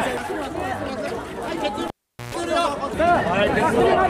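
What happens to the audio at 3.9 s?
Nothing goes wrong at 3.9 s, and the audio runs through that moment intact.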